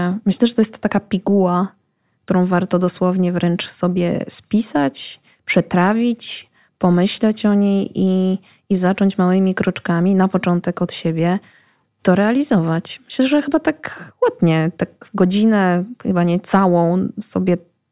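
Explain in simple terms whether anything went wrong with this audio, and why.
Nothing went wrong with this recording. It is a piece of speech with no faults to point to.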